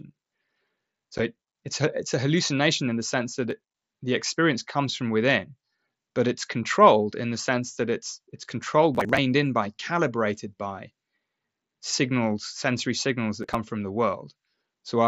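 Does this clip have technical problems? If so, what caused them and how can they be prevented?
Yes. At 1.18 s, just before "it it's", there is an unconcealed Bluetooth headset packet loss: one voice packet, about 7.5 ms, vanished between headset and phone and nothing filled the hole. A waveform shows a brief flat gap with sharp edges, and a spectrogram shows a thin vertical seam. The wideband mSBC link carried speech normally up to 8 kHz around it. Keeping the headset close to the phone, away from Wi-Fi and other 2.4 GHz traffic, or using a stack with packet-loss concealment prevents this.

Processor overload crackle appears from 3.51 to 3.87 s, between "in the sense that" and "the experience comes from", from 8.95 to 9.18 s, and from 13.43 to 13.55 s, just after "sensory signals". The processor repeatedly missed deadlines on buffers of roughly 10 ms, around ten to twenty in a row, and each missed chunk was simply skipped. 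That gives a gritty tearing over the speech, seen as a dense row of hard-edged dropouts in the waveform and broadband vertical streaks on a spectrogram. Lowering background load, enlarging the audio buffer or giving the audio thread real-time priority prevents this.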